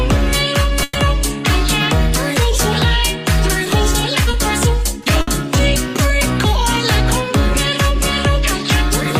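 The audio has two bursts of packet loss, at 0.83 to 0.97 s and at 5.21 to 5.29 s. The receiver fills each gap by stretching the last sound it had and letting it fade, for about 120 ms and then about 60 ms. When the real signal returns it has moved on, because that stretch of the original never arrived. The length gives it away. A burst lasts long enough to hear as a held, dying tone or hiss with material missing afterwards, rather than a momentary blip. There is also a short concealed packet loss at 4.31 to 4.35 s. Only about 20 ms failed to reach the decoder in time, and the patched-in continuation blends straight back into the true signal. It is heard as a brief smear or wobble rather than a held tail.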